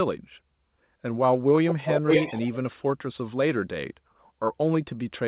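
Speech, carried over a narrowband call path with nothing above 4 kHz. From 1.68 to 2.55 s there is an echo leak: a second copy of the speech arrives 0.5 s late at roughly the original's level, likely from a far-end loudspeaker whose echo canceller let it through. A spectrogram shows similar harmonic patterns repeated half a second apart, and the waveform shows doubled envelopes.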